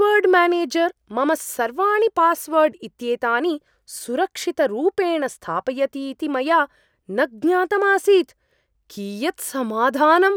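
Speech recording with no audible technical faults.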